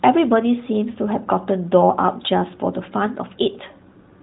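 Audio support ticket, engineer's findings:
No faults found in the speech; the AMR narrowband mobile codec path is working as expected, with nothing above 3.9 kHz and only light codec character, consistent with AMR-NB at 12.2 kbps.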